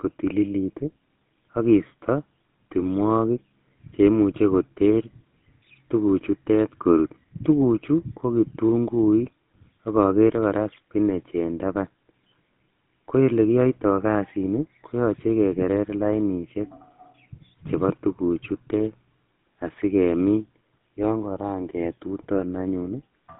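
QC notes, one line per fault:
Throughout: GSM full-rate codec. The speech has a plainly audible buzzy, gravelly roughness and a narrow phone-line band from 150 Hz to 3.6 kHz. Modelling the vocal tract with a coarse, regularly spaced pulse excitation causes the roughness, which fits a 13 kbps GSM full-rate stream.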